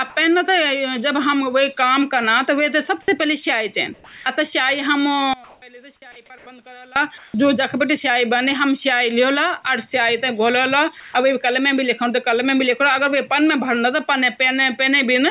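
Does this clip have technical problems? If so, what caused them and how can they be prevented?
Yes. Comfort noise replaces the background at 3.94–4.26, 5.44–5.62, 6.38–6.46, 7.18–7.34 and 11.0–11.14 s: a steady, featureless hiss, about 5 dB quieter to about 5 dB louder than the real background, unlike a dropout, which goes silent. The likely cause is discontinuous transmission filling pauses with synthetic noise. Disabling DTX, or using a better-matched noise model, prevents it.

One channel inverted, from 5.34 to 6.96 s: in mono the centred speech drops about 24 dB, leaving a faint residue rather than a uniform fade. A likely polarity flip on one stereo channel caused the cancellation. Checking channel polarity before any mono downmix prevents it.

Onset clipped by the voice detector at 5.6 and 7.32 s: speech resumes abruptly out of the comfort noise, its first 20 ms missing, unlike a gain jump that keeps the soft start. 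The likely cause is a slow voice detector. Adding hangover and look-ahead to the detector prevents it.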